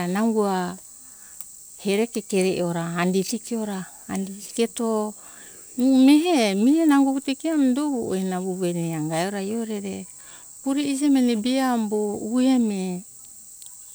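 No technical faults are audible.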